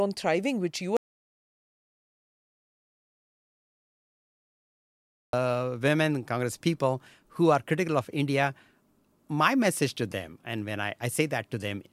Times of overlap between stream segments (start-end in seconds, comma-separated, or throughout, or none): none